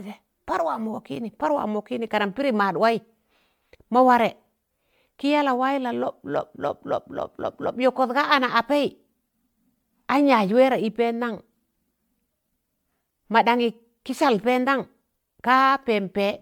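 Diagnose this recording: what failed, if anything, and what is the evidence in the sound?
Generation loss runs throughout the speech, and the stage is the codec. The sound is swirly and hollow, with blurred consonant onsets and nothing above about 19.9 kHz. The likely cause is repeated lossy re-encoding, on the order of ten passes, consistent with an MP3 chain at around 128 kbit/s. Each decode-and-encode cycle quantises again on a shifted frame grid, so the noise and spectral gaps compound beyond what that bitrate alone would produce.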